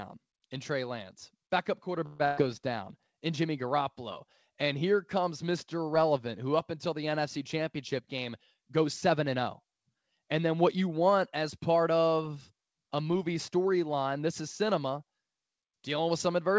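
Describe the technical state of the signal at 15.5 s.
At 15.5 s the audio is intact, with no fault present, only the ordinary band limit of the call path, which carries nothing above 8 kHz.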